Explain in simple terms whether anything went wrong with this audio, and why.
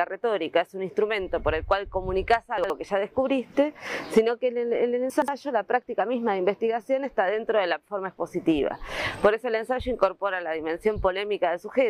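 Two short moments of chunks out of order, at 2.58–2.7 s and 5.10–5.28 s. Pieces about 60 ms long play one and two chunks late, so the sound briefly jumbles. Unlike a dropout, nothing goes missing; it's just reshuffled.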